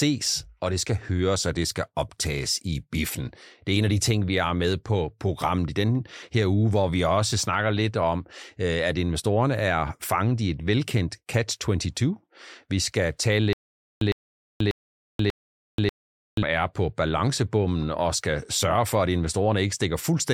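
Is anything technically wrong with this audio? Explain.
Yes. From 13.53 to 16.43 s there is a stutter with silent gaps: a 107 ms fragment repeats four times, each followed by about 483 ms of silence, on a steady 590 ms cycle. The likely cause is a stalled player or stream replaying its last fragment, so the audio that belonged in that stretch is lost.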